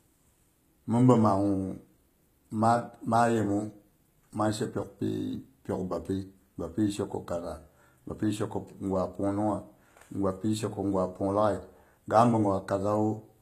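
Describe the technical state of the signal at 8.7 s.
At 8.7 s, as across the whole clip, the treble sounds synthetic: sibilants come out gritty and metallic, with nothing above 14.9 kHz. This is likely HE-AAC compression, consistent with about 20 kbps, rebuilding the upper band from copied lower bands. Unlike a plain low-pass, the top stays bright but false.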